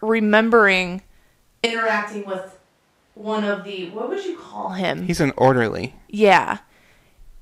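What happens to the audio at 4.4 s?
From 1.67 to 4.68 s the speech switches to a distant microphone, likely replacing the close mic: hollow, thinner, about 10 dB quieter, abrupt both ends, unlike reverb.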